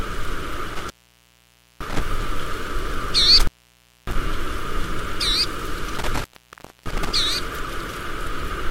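At 0.69 s, 3.40 s and 5.98 s the audio drops out from intermittent contact, a loose plug or cable briefly losing connection. The gaps last about 0.91 s, 0.60 s and 0.62 s, within spans ending at 2.02 s, 4.15 s and 7.13 s. Each dropout starts and ends with crackle, leaving faint hiss in between. On a waveform these are sudden collapses to near-flat, fringed by spiky bursts. A spectrogram shows broadband vertical streaks at the edges around a dim, featureless gap.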